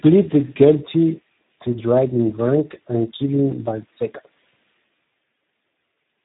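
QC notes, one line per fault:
Throughout, Speex codec artefacts. The speech sounds hoarse and noisy, which fits a low setting around 8 kbps. Too few bits reach the excitation signal, so it turns rough. Nothing is heard above 3.8 kHz, so the sound is narrow and muffled.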